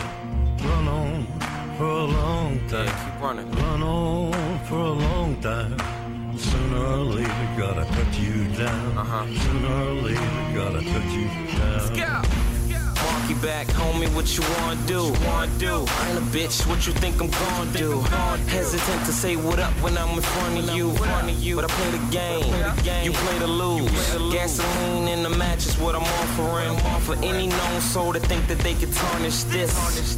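A hiss-like roughness rides on the sound for the whole clip, growing with loud and bright passages and dropping away in the quiet gaps. This is sample clock jitter: the converter's clock wandered by a few microseconds, so each sample was captured a little early or late. Where the waveform changes quickly, that timing error becomes an amplitude error, here sitting roughly 25 dB below the signal.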